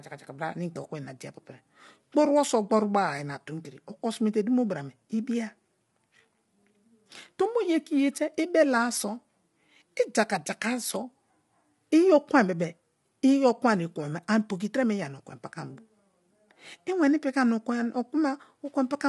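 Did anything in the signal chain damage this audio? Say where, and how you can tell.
Yes, at the codec: grainy speech throughout, spectrogram shows noise between blurred harmonics and nothing above 11.7 kHz, likely low-delay AAC compression whose short frames starve harmonics.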